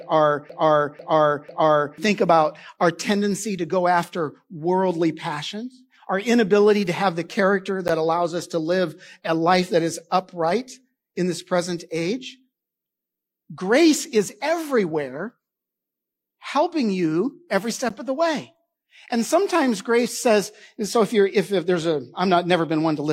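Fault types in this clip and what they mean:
Broken-record loop, 0.0 to 1.98 s: the clip opens with the loop already under way, a 495 ms fragment of speech repeating exactly, back to back, three times before normal playback takes over. The cause is likely a stalled player, encoder or stream that kept re-sending the last piece it held instead of new material, so whatever should have played in those first two seconds is missing.
Gap between chunks, 7.88 s and 17.89 s: two brief holes of silence, each 12 ms long, cut into the speech exactly 10 s apart. That spacing points to the audio being delivered or stored in 10-second chunks, with a small stretch of silence inserted at each join, such as padding or a late start on the next chunk. No sound is lost, but the flow is broken at each boundary.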